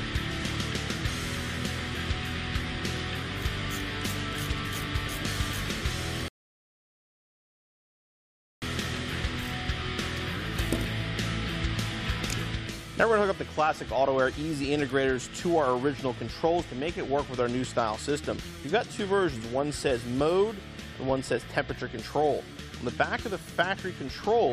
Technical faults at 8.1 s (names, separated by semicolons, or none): rebuffering stall